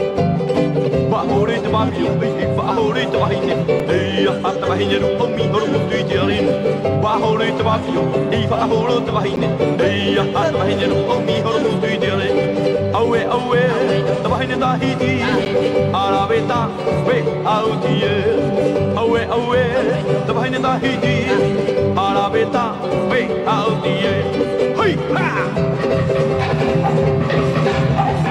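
At 3.80, 9.36 and 15.45 s, the sound drops into a block of digital silence, about 4, 10 and 10 ms long. The sound cuts out with no fade. Each is heard as a short tick.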